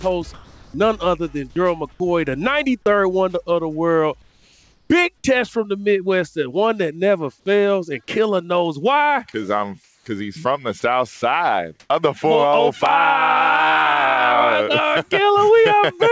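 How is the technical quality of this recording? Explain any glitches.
It's got a handful of short gaps and background swaps typical of a voice call. Everything sits under about 8 kHz, which fits a wideband call codec.

Sound dropped by the voice detector shows up at 0.34–0.74 s, 1.92–2.00 s, 10.80–10.82 s and 11.16–11.22 s. The sender's detector likely mistook real sound for background and stopped sending, so the receiver filled in with comfort noise. You lose about 220 ms in the first gap and 40 ms in the second, plus the full 20 ms and 60 ms of the last two, replaced by flat hiss until the detector triggers again.

Comfort noise in place of the background appears at 4.22–4.90 s, 9.84–10.06 s and 11.80–11.90 s. During those pauses the sender likely went into discontinuous transmission, and the receiver synthesised a steady, featureless noise shaped roughly like the real background. The natural texture flattens out. 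In the first two spots the fill is about 2 dB and 1 dB quieter than the real background. At 11.8 s it jumps about 12 dB louder.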